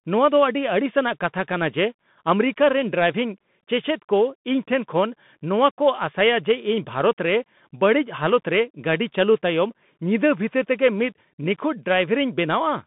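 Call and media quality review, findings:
Narrow, boxy speech for the whole clip, band limited to 150 Hz to 3.6 kHz; scratchy s sounds, grainy hiss beneath, harsh breakup on loud bright syllables. Bluetooth CVSD headset codec: one-bit up/down coding whose adaptive step lags fast highs; fits a 64 kbps link.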